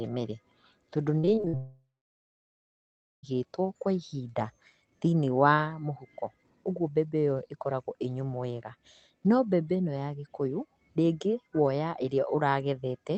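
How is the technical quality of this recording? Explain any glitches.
The recording has two connected network faults early on, both between about 1.2 and 3.2 seconds. The audio carries the dull top of a low-rate Opus call, with nothing above about 8 kHz.

From 1.19 to 1.55 s there is repeated packet loss, giving a robotic sound. Five short holes open in quick succession, the longest about 53 ms. Each one is patched by stretching the last bit of sound forward. Close to half of this span is patched rather than real. The speech turns choppy, with small pieces missing.

A long network dropout follows at 1.57 s and lasts until 3.25 s. First the last sound smears on as a short fading buzz. Then about 1.38 s of silence follows. When the speech returns, the stretch in between is gone and is never played later. The likely cause is a longer break in the connection, where no audio reached the receiver. 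The concealment could only continue the last sound briefly before giving up.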